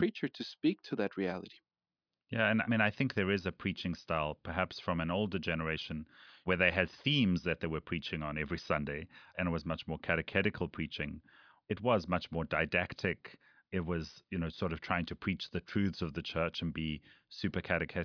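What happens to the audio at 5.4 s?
Nothing goes wrong at 5.4 s: the speech runs on intact through that moment, with no dropout, click, glitch or other audible fault.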